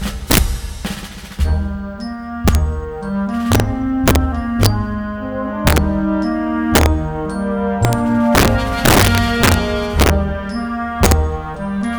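Integer overflow runs through the whole clip: the signal was driven about 8 dB past the integer ceiling, and instead of being held at the limit, each peak wrapped to the opposite extreme. Around one percent of samples flip this way, so the loudest moments erupt in harsh, violent cracks far sharper than ordinary clipping.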